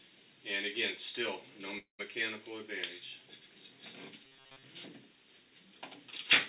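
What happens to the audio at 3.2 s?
Nothing goes wrong at 3.2 s: the audio carries on intact through that moment, with the telephone-band sound of the call path, which has nothing above 4 kHz.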